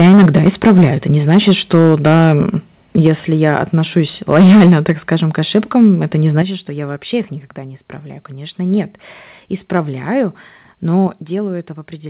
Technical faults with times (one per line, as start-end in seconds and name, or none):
0.00-0.86 microphone overload
1.29-2.41 microphone overload
2.96-3.09 microphone overload
3.07 microphone volume stepped down
3.43-3.56 microphone overload
4.33-5.12 microphone overload
5.55-5.88 microphone overload
6.37-6.42 microphone overload
6.42 microphone volume stepped down
11.07 microphone volume stepped down